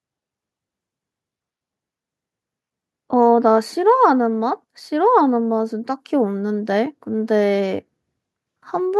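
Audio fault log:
Nothing wrong turns up anywhere in this speech, so there's nothing to log here.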